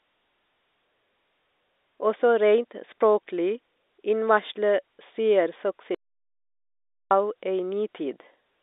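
At 5.95 s the speech stops dead and only returns at 7.11 s, an audio dropout to silence lasting about 1.16 s. The gap holds no room tone or line hiss at all, so the input was likely lost while the recording carried on writing silence. Whatever was said in that stretch is missing. On a waveform it shows as a flat line, and on a spectrogram as a black band cutting across the 300 Hz to 3.7 kHz telephone band that frames the rest of the speech.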